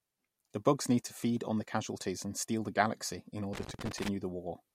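From 3.53 to 4.08 s, just after "steal the galaxy in", irregular crackling chops the speech: loose connector crackle, a worn or dirty contact making and breaking as it moves.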